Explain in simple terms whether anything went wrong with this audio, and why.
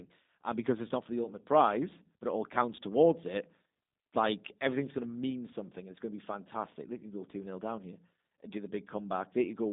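Yes, something went wrong: the speech went through the G.729 codec throughout. It rebuilds speech cheaply, so it sounds rough, synthetic and muffled, with nothing above 3.8 kHz.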